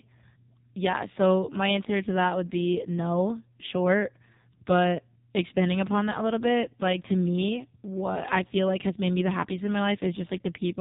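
Throughout, the speech carries heavy AMR narrowband mobile codec damage: nothing above 3.7 kHz, with a buzzy, synthetic vocal-tract rendering that fits a low 5.9 kbps mode.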